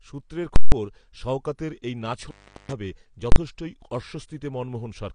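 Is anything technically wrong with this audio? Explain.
Yes, there are three kinds of fault in this speech.

AAC compression runs throughout. Nothing is present above 10.6 kHz, and the damage is plainly audible: the top end is dull and sibilants smear with a fizzy, warbling texture. That points to AAC-LC at a low rate, likely around 32 kbps. At that rate the encoder lowers its cut-off and quantises the remaining frequency lines too coarsely to keep fine detail.

Invalid numbers at full scale occur twice. From 0.56 to 0.72 s, just before "শওকতের এই", a 160 ms block was pinned at one extreme value. A calculation produced infinite or invalid values, which were clamped to full scale. This is heard as a very loud pop at each edge with nothing in between. At 3.32 to 3.36 s the block lasts only 40 ms, so it lands as a single bang.

An intermittent contact fault follows "শওকতের এই", from 2.23 to 2.72 s. 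A loose cable or plug opens the signal path for about 383 ms. The sound drops out with crackle where the contact breaks and remakes, and faint hiss remains while the line is open.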